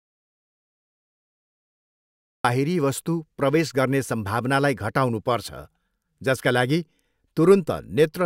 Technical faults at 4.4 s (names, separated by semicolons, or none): none